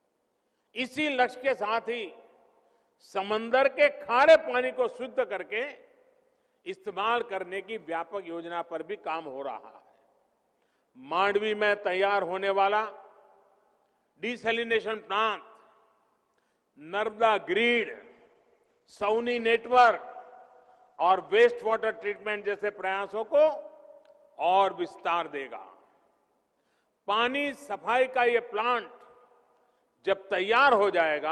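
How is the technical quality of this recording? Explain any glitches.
The recording has one clear glitch: a call bitrate drop from 17.72 to 23.75 s. The encoder's budget appears to fall from roughly 48 to 15 kbps, held lowest for about 5.6 s. Coarser coding sounds rough and watery. The top end narrows from 20 kHz to 12 kHz, dulling the sound until recovery.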